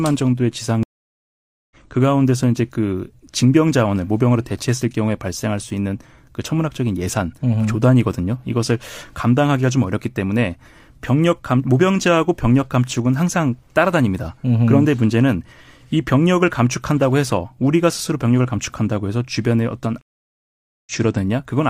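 At 0.83 to 1.76 s the speech stops for 0.88 s in a stream reconnect: the connection dropped, the player fell silent, reconnected and started a new decoder partway through the stream. The speech returns about a second further on, with no overlap and no repeat. That skipped stretch sets it apart from a simple dropout, which resumes where it stopped. The same happens at 20.01 to 20.92 s, with 0.85 s of silence and a jump of about half a second.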